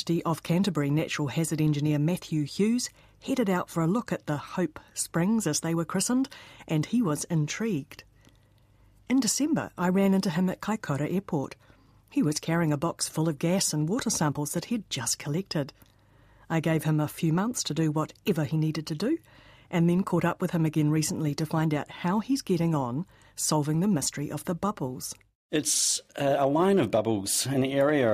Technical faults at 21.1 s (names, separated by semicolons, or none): none